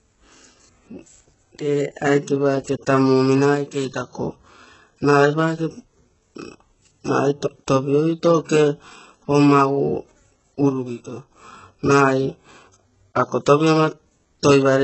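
From the start the speech has that heavy HE-AAC compression sound, likely at a very low bitrate, somewhere around 8 kbps. Nothing survives above about 7.9 kHz, and the treble that's there is rebuilt from copied lower bands, so s sounds come out gritty and lispy, with a metallic edge.

Then at 3.55 to 4.09 s, and again at 10.69 to 11.31 s, the level suddenly sags by about 6 dB and recovers. That's the classic sign of one channel dropping out, likely with a stereo signal being summed to mono, so the shared content halves while one side is missing.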